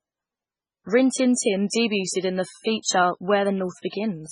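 A short speech recording carries heavy MP3 compression artefacts throughout, likely from encoding at a very low bitrate, consistent with roughly 16 kbps. Nothing is present above 10.5 kHz, and weak spectral lines drop in and out between frames, giving a watery, swirling texture with chirpy sibilants and smeared attacks. Pre-echo appears twice: a short hiss spreads about 36 ms ahead of an attack from 1.34 to 1.37 s, and about 28 ms from 2.82 to 2.85 s just after "in the". Each onset sounds softened because quantisation noise sized for the loud transient fills the quiet moment before it.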